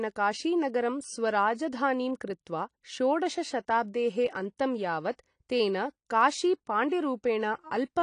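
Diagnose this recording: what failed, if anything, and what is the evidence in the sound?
Codec: the speech is dull and smeared throughout, with fizzy sibilants and nothing above 10 kHz, likely AAC compression at a low bitrate. A spectrogram shows a hard ceiling with patchy holes.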